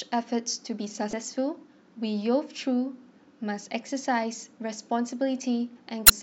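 At 1.10–1.13 s and 6.06–6.10 s, damaged data in the compressed stream makes the decoder misread frames, producing a brief chirp, squawk, click or short hole.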